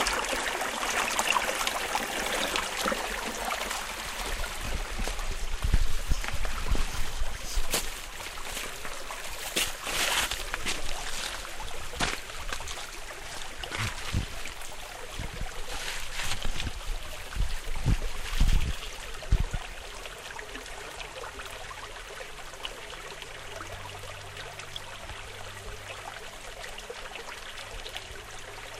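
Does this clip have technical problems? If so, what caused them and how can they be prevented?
Yes: overlapping chunks at 9.68, 14.70, 19.72 and 24.74 s, every 5 s, replay about 21 ms twice, giving regular stutters, seen as thin vertical lines on a spectrogram. Trimming each chunk's overlap before joining, or crossfading it, prevents this.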